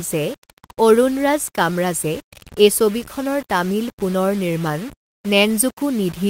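Speech throughout carries grainy distortion that tracks the signal, with quiet passages turning gritty and the softest moments sputtering or dropping out. The error sits roughly 20 dB below the speech. This is likely low bit depth without dither, with rounding to about six bits.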